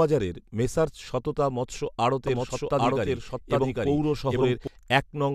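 Right after "মেসার্স সততা মৎস্য", at about 2.27 s, a doubled audio track kicks in and runs to about 4.67 s. A second full-band copy of the speech sits roughly 0.7 s behind the first at about the same loudness, so everything gets talked over by itself. There's no reverb tail or room colour on it, and it cuts in and out abruptly. The likely culprit is a slower second capture path or an edit leaving two out-of-step copies stacked.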